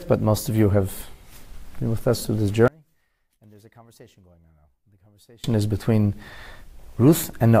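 From 2.68 to 5.44 s the sound collapses by about 32 dB, background included. Unlike a dropout, a quiet residue remains, pointing to one channel likely inverted before mono summing.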